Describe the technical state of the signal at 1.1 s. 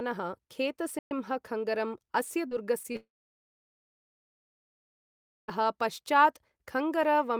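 At 1.1 s the signal is at the tail of a playback stall. The speech cuts off abruptly at 0.99 s. The output then stays silent for about 120 ms, until 1.11 s. After the gap the speech carries on. The likely cause is the player running short of data, or its playback thread being held up. Either way, nothing reaches the output until it recovers. What you hear is a hard hole in mid-flow.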